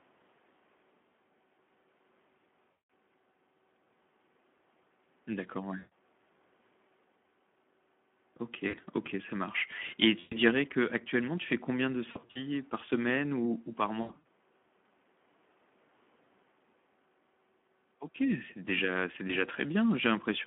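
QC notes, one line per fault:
Throughout: Speex codec. The low-rate CELP encoder has too few bits to model the excitation properly, and the coding noise and hoarseness fit a setting near 11 kbps. The sound comes out rough and hoarse with a plainly audible grainy, buzzy texture. It is confined to a 200 Hz to 3.4 kHz telephone band, so it sounds thin and loses all its upper air.
2.71 to 19.33 s: VoIP packet loss concealed by the speech codec. Packets went missing at 2.71–2.89 s (180 ms), 5.77–5.89 s (140 ms), 8.67–8.80 s (60 ms), 10.20–10.37 s (120 ms), 12.11–12.43 s (140 ms scattered, longest run 40 ms), 14.01–14.20 s (180 ms scattered, longest run 80 ms) and 19.27–19.33 s (20 ms). Each time the decoder kept repeating its last pitch and filter at falling gain. The gap becomes a smeared buzzy tone or coloured noise that fades, and the sound stays weak briefly after packets resume.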